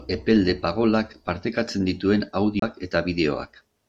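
After "partekatzen dituen", at 2.60 to 2.62 s, the speech ticks, mutes briefly and resumes elsewhere: a CD skip, where the laser jumped to another spiral turn.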